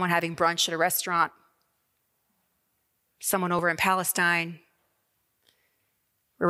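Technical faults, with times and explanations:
0.34 to 5.22 s: clock drift buffer slips. A short click recurs every 1.62 s across this span, about four in all. Each click is a small jump in the speech waveform, like a few dozen samples skipped or repeated. This is likely two devices running on separate clocks that disagree by something like 400 ppm. The buffer between them drifts full or empty. It then slips a small block to recover, and that abrupt discontinuity is heard as a click.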